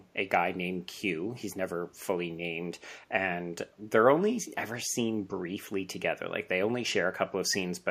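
From 4.89 to 4.94 s, a brief echo leak: a very faint copy of the speech, trailing it by 376 ms, most likely from a loudspeaker echo canceller missing part of its microphone pickup. On a spectrogram it appears as a weak, short smear repeating earlier harmonics.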